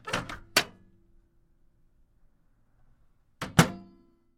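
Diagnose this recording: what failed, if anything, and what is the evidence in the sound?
Nothing in the recording points to a failure at any stage, so there's no fault to diagnose here.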